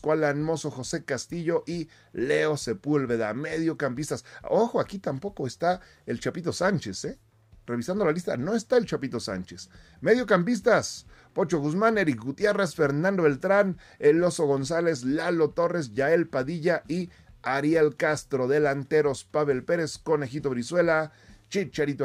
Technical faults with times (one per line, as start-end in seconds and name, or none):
none